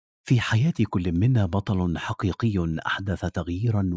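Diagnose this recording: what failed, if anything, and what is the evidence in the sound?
Bit error spikes at 1.16 s and 3.29 s point to a flipped bit in storage or on a digital link. Each is a lone sharp tick, a needle two or three samples wide on the waveform and a thin full-height vertical line on the spectrogram, while the call processing's 8 kHz ceiling is normal, not a fault.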